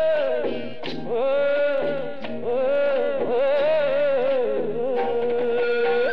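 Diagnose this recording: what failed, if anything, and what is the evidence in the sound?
There's a DC offset across the whole clip, likely from the converter or analogue input. You can't hear it, but it shows as steady energy at the very bottom of the spectrum and uses up headroom.

From 0.10 s to 6.13 s there are clock slip clicks, a soft rattle of single-sample ticks about every 20 ms. That likely points to two unsynced device clocks differing by roughly a thousand ppm.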